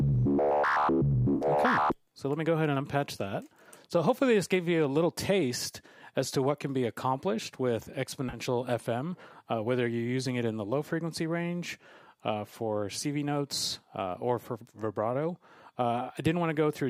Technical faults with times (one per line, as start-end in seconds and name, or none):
1.35-1.45 AAC frame loss with concealment
8.28-8.38 AAC frame loss with concealment